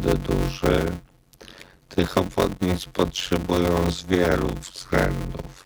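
From start to finish there's a block size mismatch (padded): a buzz at about 91.9 Hz runs all the way through. Each short write, which fits 256-sample blocks, gets zero-filled to a larger read block, so the sound plays at 0.533 times normal speed but keeps roughly its normal pitch.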